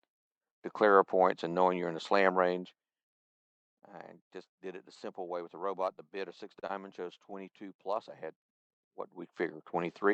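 Around 6.59 s there's a short stall from a late packet, running to about 6.65 s. A packet simply didn't show up on time, so the jitter buffer drained and the receiver kept the last bit of sound going for roughly 32 ms until the packet arrived. Playback then picks up right where it left off, so nothing is lost, but everything after that point sits 32 ms later, and you get a slightly held, faintly buzzy spot.

Right after, from 6.67 to 6.71 s, comes a short concealed packet loss. This time about 20 ms of audio never made it to the decoder, and the receiver patched the gap with around 24 ms of synthesised continuation before blending back into the real signal. To the ear it's a tiny smear or wobble, and since that stretch is gone for good, anything very brief inside it can drop out entirely.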